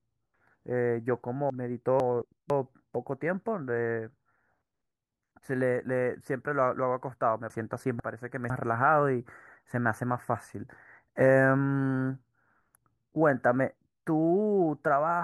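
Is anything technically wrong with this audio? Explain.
Yes. Twice, at 1.5 to 2.5 s and again at 7.5 to 8.5 s, the speech has chunks out of order. In each case one 500 ms chunk was delivered or written a chunk late, so it plays after the half-second that should follow it. No audio goes missing, but each one-second stretch is swapped around with three hard joins, heard as a brief jumbled moment of speech.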